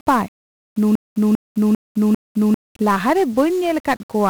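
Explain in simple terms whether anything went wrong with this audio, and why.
Two things went wrong. The whole speech recording has been squeezed with 1-bit DFPWM compression, a crude format that keeps just one bit per sample and uses it to nudge a running level up or down. That coarse steering cannot follow the sound closely, so the damage here is heavy: the voice comes through fuzzy and crackly from start to finish, with the crisp, high parts of the sound dulled or replaced by hiss.

The second problem is a broken-record loop from 0.95 s to 2.54 s. A fragment about 0.4 s long plays four times in a row, exactly the same each time, like a scratched record. The likely cause is that playback or the stream stalled and kept resending the last fragment it had. Whatever should have been heard in that stretch is missing.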